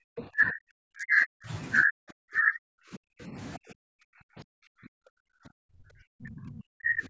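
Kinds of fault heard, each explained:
Speech suppressed in double talk: The talker's level collapses in three stretches, from the start to 1.51 s, from 1.83 to 3.36 s, and from 3.57 s to the end, with the deepest dips reaching roughly 40 dB down. This most likely happens because the echo canceller, facing both ends talking at once, cannot tell the near talker from loudspeaker echo and attenuates everything. Covering most of the clip, it leaves the voice dipping.
Other side's voice leaking through: A brief scrap of a second voice appears from 0.17 to 0.21 s, roughly 15 dB below the main speech and sitting inside the first suppressed stretch. The far end's audio, played on the talker's loudspeaker, has reached the microphone and likely survived the echo canceller only in part. Lasting about 40 ms, it registers as a short blip of foreign sound.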